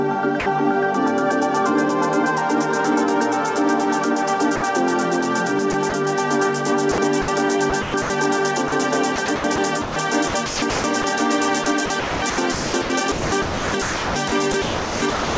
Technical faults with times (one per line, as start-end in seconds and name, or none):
0.40-0.46 sound dropped by the voice detector
4.56-4.62 sound dropped by the voice detector
5.72-5.92 sound chopped by the voice detector
6.92-8.10 sound chopped by the voice detector
8.68-11.04 sound chopped by the voice detector
11.64-15.38 sound chopped by the voice detector